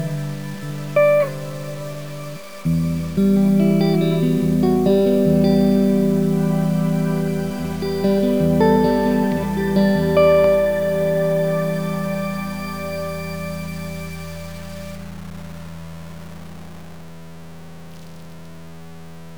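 From start to finish, the audio has a grainy, gritty distortion that rises and falls with the sound and sits only about 25 dB below it. The likely cause is low bit depth without dither, truncated to around 6 bits. A waveform shows visible stair-steps, and a spectrogram shows broadband hash that tracks the signal.

From 10.44 to 10.47 s, a single loud pop cuts sharply across the sound, which carries on underneath. It is likely a voltage transient from a switch, plug or static. The waveform shows a spike standing well above the surrounding peaks, and the spectrogram shows a thin vertical stripe spanning all frequencies.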